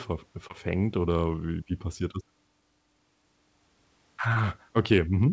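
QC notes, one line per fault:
0.48–0.51 s and 4.33–4.37 s, short concealed packet loss: about 20 ms dropped each time and patched by stretching the preceding sound, so you get a quick smear, the first just before "oder wie wie passiert".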